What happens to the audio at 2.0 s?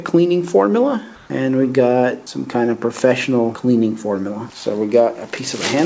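Nothing goes wrong at 2.0 s: the audio continues intact, with only the steady 8 kHz bandwidth limit of the G.722 call codec it passed through.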